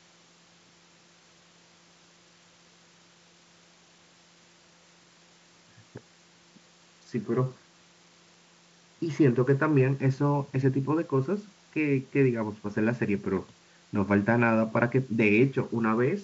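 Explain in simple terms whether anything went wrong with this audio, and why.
Nothing went wrong with this speech recording: the sound carries the ordinary character of wideband telephone coding, clear through the speaking range with at most a faint hiss up high, and no technical fault can be heard anywhere in it.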